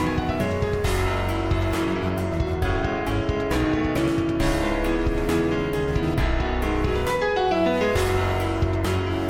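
No technical faults can be heard anywhere in this audio.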